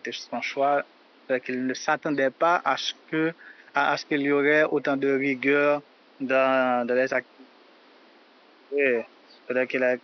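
No technical faults can be heard in the signal, and the only thing beneath the speech is a low room noise sitting about 32 dB below it.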